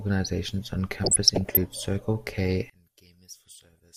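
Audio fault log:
1.04–1.63 s and 3.54–3.78 s, DAB burbling: the speech is overlaid with short blips of noise. Bit errors at a low rate, well under one percent, get past error correction and corrupt sample values and scale factors in the MP2 stream. Wrong scale factors, where they get through, throw individual sub-bands up or down in level. Unlike packet-loss dropouts, the sound never goes silent or repeats. It keeps running, but with blips of noise in single sub-bands.
2.70–3.96 s, one channel inverted: the speech drops by about 23 dB to a faint residue that lasts to the end of the clip. The likely cause is one stereo channel flipped in polarity, so the centred speech cancels when the channels are summed to mono and only their small difference remains. A simple gain drop or fade would keep the full tone at a lower level.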